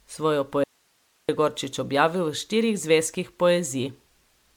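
Throughout, the speech sounds swirly and hollow with smeared attacks, likely generation loss from around ten MP3 passes at what sounds like 128 kbit/s; the spectrogram shows holes below a 19.9 kHz ceiling. From 0.64 to 1.29 s, an audio dropout to a faint residue leaves only hiss, about 45 dB down, for 0.65 s. The waveform collapses abruptly, likely from a broken upstream feed.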